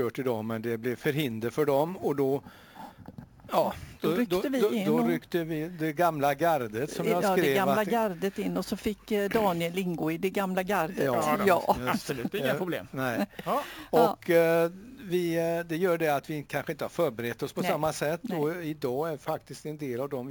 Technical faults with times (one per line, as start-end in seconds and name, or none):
0.00-20.30 imaging from sample-and-hold upsampling